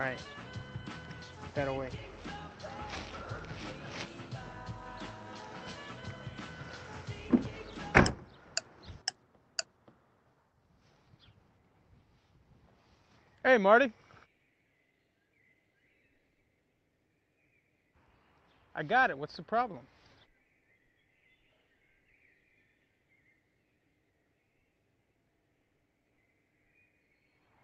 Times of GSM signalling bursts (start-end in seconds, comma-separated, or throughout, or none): none